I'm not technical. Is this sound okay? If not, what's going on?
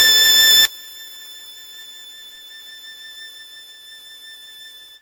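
No, there are two problems. The first runs through the whole piece of music. It sounds swirly, smeared and a bit hollow, and the starts of notes have lost their sharp edges, as if everything were slightly blurred. That's generation loss. The likely cause is that the file was squeezed down into a compact format like MP3 and unpacked again, over and over, around ten times. Each round throws away a little more detail, and the damage piles up.

The second starts at about 0.65 s and lasts to the end. When the sound plays through a single speaker or a phone, the music suddenly drops away to something faint, with nearly all of it gone. That points to one channel inverted. One side of the stereo pair is likely flipped upside down, so when the two sides are combined, everything they share cancels out and only a ghostly remainder is left.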